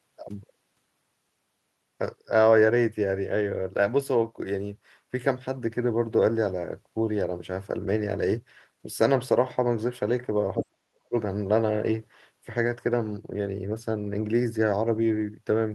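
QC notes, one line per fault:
10.57–11.15 s, speech suppressed in double talk: with both ends talking at once, the echo canceller likely mistook this talker for loudspeaker echo and clamped down hard, so the speech sinks by about 40 dB and breaks up for roughly half a second.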